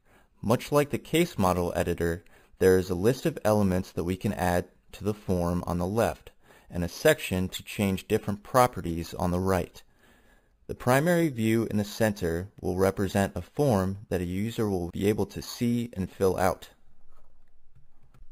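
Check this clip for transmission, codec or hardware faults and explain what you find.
One fault runs through the whole clip: imaging from sample-and-hold upsampling. Repeated samples without smoothing leave mirror images from roughly 5.5 to 11 kHz, about 20 dB down, consistent with 11 kHz audio raised to 44.1 kHz. The result is a metallic fizz that tracks the sound's level.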